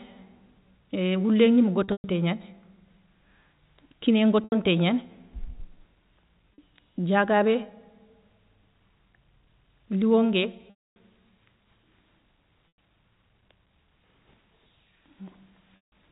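Packet loss with pitch repetition strikes the speech stream six times, and each time the receiver bridges the gap by repeating the last pitch period. The losses are at 1.84 to 2.04 s (160 ms scattered, longest run 120 ms), 4.44 to 4.52 s, 6.54 to 6.58 s, 10.70 to 10.96 s (260 ms), 12.69 to 12.77 s, and 15.76 to 15.92 s. The 40 ms gap sounds like a briefly held, buzzy tone. The longer ones let the repeated buzz fade toward silence before the speech cross-fades back in, over the narrow G.711 telephone band.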